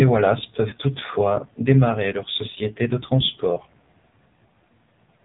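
From the first moment the speech runs through the AMR narrowband mobile codec, and it's heavily squeezed. The audio is sampled at 8 kHz, so nothing above 4 kHz survives, which gives that boxed-in phone sound. The codec rebuilds speech from a vocal tract model and a few pulses, and here it sounds buzzy and synthetic, which fits one of the low AMR-NB modes, around 5.9 kbps.

At 0.70 to 0.74 s, right before "toutefois démarrer leur société", there's a short dip or warble. That's a lost AMR speech frame. A radio error made the frame fail its checksum, so the decoder filled the gap by reusing the last good pitch and vocal tract settings at lower gain. The gap is about 20 ms, which fits a single lost frame, so it's brief and the voice comes back weak or rough for a moment.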